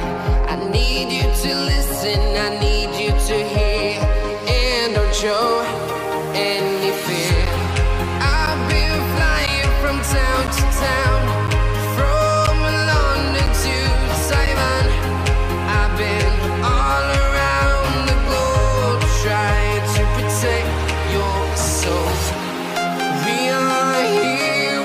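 Regular ticks every 1.0 s from 7.46 to 14.47 s, about seven gaps of roughly 10 ms each: periodic USB or driver dropouts.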